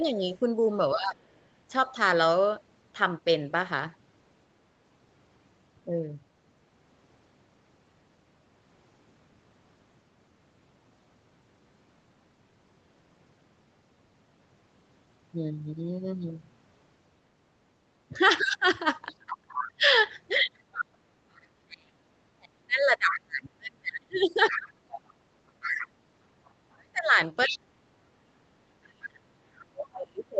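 From the start to 1.94 s, the voice dips in short pieces, totalling about half a second, by up to about 15 dB. This is likely speech suppressed in double talk. The echo canceller cannot separate the talker from loudspeaker echo, so it turns both down.

From 18.09 s to the end, the same suppression returns and goes much deeper, up to about 35 dB. The voice drops and cuts out in pieces.

Within that stretch, the other side's voice leaks through at 19.33 to 19.67 s, 23.1 to 23.2 s, 24.13 to 26.47 s, 27.47 to 27.57 s and 29.58 to 29.93 s. It sits about 10 dB below the talker, about 5 dB at 23.1 s, and about 30 dB at 29.58 s. The canceller likely left loudspeaker sound in the microphone signal.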